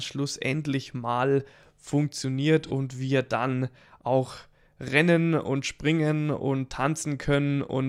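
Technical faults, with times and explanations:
2.65–2.71 s, AAC frame loss with concealment: between "mal funktioniert" and "wir dann auch rennen", the decoder lost roughly 43 ms of data, pointing to a single missing frame, and patched it from the previous spectrum, leaving a brief smeared, noisy blur.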